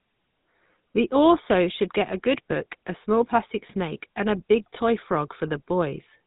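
Speech runs through the GSM full-rate codec for the whole clip, giving a buzzy, gravelly roughness from the coarse pulse excitation, consistent with a 13 kbps GSM link. On a spectrogram the energy stops abruptly near 3.8 kHz, leaving empty space above, while harmonics look smeared and grainy.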